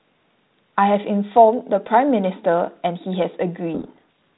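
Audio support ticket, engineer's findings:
Harsh, grinding distortion swamps the speech from 3.74 s to the end of the clip at 4.38 s. Probable component: G.726 decoder. Codec payload misread. Code-word bit order reversed between ends, so each 4-bit difference value decodes wrong and the adaptive predictor drifts. G.726 path at 32 kbit/s, band-limited below 4 kHz with light coding noise before onset.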